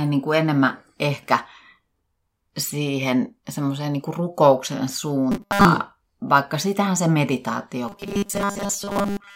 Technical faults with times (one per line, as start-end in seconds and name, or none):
5.32-5.65 robotic sound from repeated short buffers
7.88-9.36 robotic sound from repeated short buffers